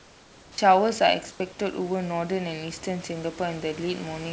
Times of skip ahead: none

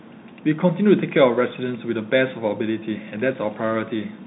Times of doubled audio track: none

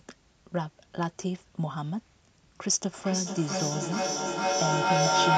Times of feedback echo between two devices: 2.89-5.38

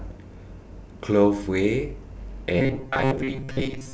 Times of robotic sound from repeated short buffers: 2.59-3.94

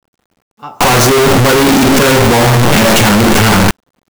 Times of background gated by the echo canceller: none

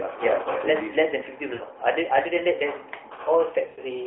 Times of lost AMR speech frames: 1.54-1.62, 3.66-3.80

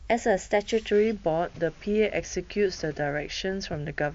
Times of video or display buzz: none

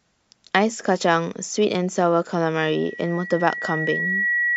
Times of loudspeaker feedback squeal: 2.64-4.56

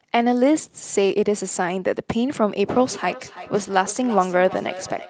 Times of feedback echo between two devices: 2.71-5.10

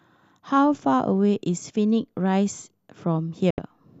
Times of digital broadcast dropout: 3.50-3.58

